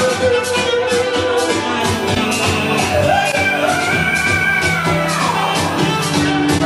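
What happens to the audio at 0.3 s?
Nothing goes wrong at 0.3 s; the audio there is intact, with no dropout, click, distortion or other fault.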